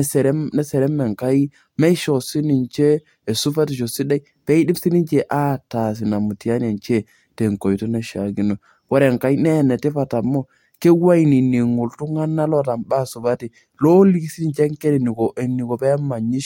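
No technical faults can be heard anywhere in the speech recording. There are no events to place along the timeline, so nothing needs describing in order.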